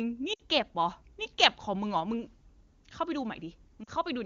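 Radio errors corrupted speech frames so they failed their checksum, and the AMR wideband decoder covered the gaps by repeating the last good pitch and vocal tract settings at falling gain. From 0.33 to 0.40 s, 60 ms is lost: the sound sags to near silence, then returns briefly rough. From 3.84 to 3.90 s, a 40 ms loss gives a shorter drop toward silence. These lost AMR speech frames stand out against wideband coding that fits a high AMR-WB rate.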